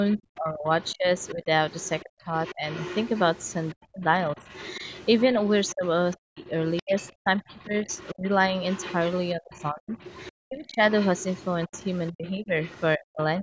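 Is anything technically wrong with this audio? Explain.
Yes. From 0.1 to 12.81 s a second, fainter voice runs underneath the speech, roughly 20 dB quieter. This is other side's voice leaking through: the far end likely played on a loudspeaker, and the echo canceller failed to strip all of it from the microphone.

The main speech also dips sharply, by as much as 35 to 40 dB, in pieces during 0.14 to 2.68 s, 3.82 to 4.45 s, and from 5.74 s to the end. Together the dips last about five seconds. This is speech suppressed in double talk: with both sides talking at once, the canceller likely could not separate the talker from the echo and turned both down. The call's microphone processing, which removes content above 8 kHz, is not a fault.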